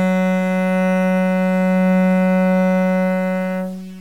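From start to end the sound carries grainy, gritty distortion that rises and falls with the signal, the mark of low bit depth without dither. The coarseness likely comes from truncating the samples to very few levels, consistent with around 7 bits, with the error sitting roughly 35 dB below the signal. A waveform shows visible stair-steps, and a spectrogram shows signal-following broadband hash rather than a steady noise floor.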